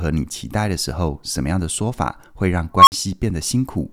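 A speech recording with an unstable filter fault starting at 2.75 s: a tone of roughly 1 kHz swells from nothing to a loud, clipped squeal over about 124 ms, then the output drops out for 50 ms before returning at 2.92 s. A recursive filter fed bad coefficients feeds its own output back with growing gain until the values overflow. On a waveform this appears as an expanding envelope flattened where it clipped, then a flat gap; a spectrogram shows one brightening horizontal line near 1 kHz, then a blank strip.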